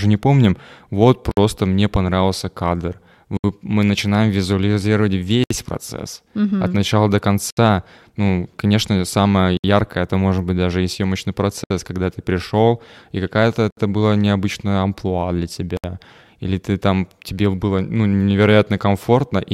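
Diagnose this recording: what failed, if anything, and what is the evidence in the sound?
Codec stage: separately encoded pieces were joined without trimming encoder delay and padding, leaving a gap at each join of encoded pieces. The speech drops out for about 59 ms at 1.31 s, then about 67 ms at 3.37, 5.44, 7.51, 9.57, 11.64, 13.71 and 15.77 s, every 2.0 s, before carrying on.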